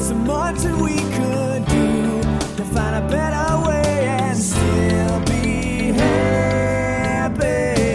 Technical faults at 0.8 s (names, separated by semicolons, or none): none